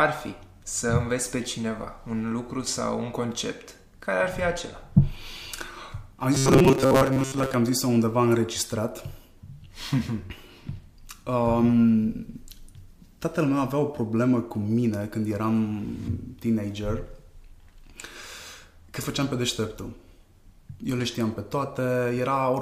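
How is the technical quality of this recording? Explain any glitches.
There's one real glitch, a stretch of robotic sound from repeated short buffers between 6.35 and 7.54 s. The audio turns into a rigid, metallic buzz locked at 134 Hz, which fits a buffer of roughly 7.5 ms being looped. The likely cause is new audio arriving too slowly, so the player keeps replaying that last little chunk and skips most of the real material in that window.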